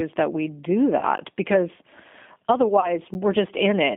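Throughout, the speech has passed through the G.729 codec. The band is held to roughly 150 Hz to 3.5 kHz, and the voice has the rough, slightly synthetic edge of a coder that rebuilds speech from a vocal tract filter, a pitch predictor and a few pulses per frame, which fits G.729's 8 kbit/s. This damage is plainly audible and constant, unlike the brief events that follow.

Just after "that we do", from 0.99 to 1.04 s, VoIP packet loss concealed by the speech codec appears. About 30 ms of audio went missing, which fits a single lost packet. The decoder filled the hole by repeating its last pitch and filter settings at falling gain, so the sound smears into a buzzy tone or coloured noise that fades rather than stopping. Because each frame builds on the one before, the voice stays weak or distorted for a moment after real packets resume. The same thing happens again from 2.80 to 2.90 s, where the recovery tail runs longer.

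At 1.18 s, still after "that we do", there is a block of digital silence about 10 ms long. The samples were zeroed, so the sound drops out and returns with no fade at all, and the result is heard as a tick or a dip. This is what separates it from the concealment: there is no buzz or decay, only a hard cut. A second identical gap follows at 3.14 s.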